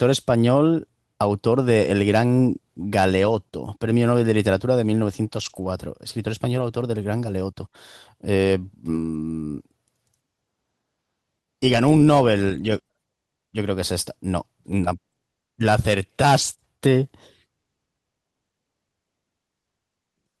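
Lost packets rebuilt from error correction at 5.37–5.67 s, 6.57–6.63 s, 7.61 s and 9.13–9.15 s: the speech never drops out but turns briefly rough and noisy, played from a low-bitrate backup copy rather than a smeared guess.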